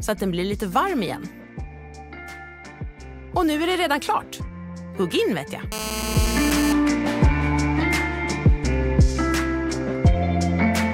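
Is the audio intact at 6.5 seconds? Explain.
No. At 6.5 s you're right inside a burst of GSM phone buzz running from 5.72 to 6.73 s. A 2G handset close to the gear is transmitting in pulses about 217 times a second, and the audio circuitry rectifies those radio bursts into the signal. You hear a hard, raspy buzz at 217 Hz, loaded with harmonics and having nothing to do with the sound itself. It sits at about 6 dB below the audio and holds steady, the way it does during a call.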